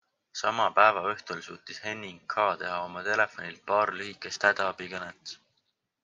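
Periodic clock jitter from 3.84 s to the end: a converter clock wobbling at around 300 Hz puts sidebands on the speech, giving a rough, metallic edge.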